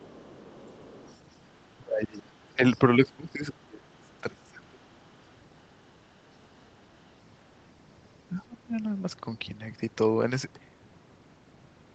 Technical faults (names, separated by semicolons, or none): other side's voice leaking through; speech suppressed in double talk